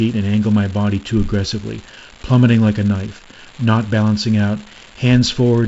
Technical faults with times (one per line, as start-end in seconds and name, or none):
0.00-5.68 unreliable data bit